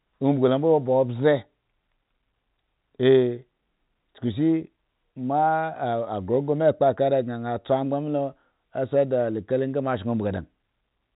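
No technical faults can be heard in this speech clip. It carries the narrow band of G.711 telephone coding, with nothing above about 3.8 kHz.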